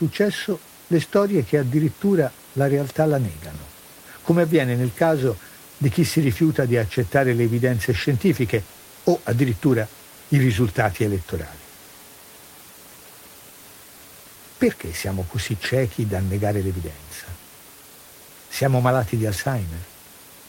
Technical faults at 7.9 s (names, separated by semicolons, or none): none